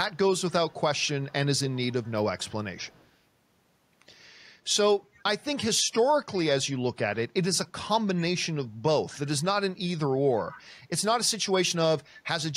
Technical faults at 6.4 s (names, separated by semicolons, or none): echo leak